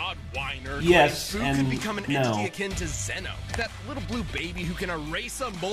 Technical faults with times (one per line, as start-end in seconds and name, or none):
1.99 dropped samples
3.70 dropped samples
4.64 dropped samples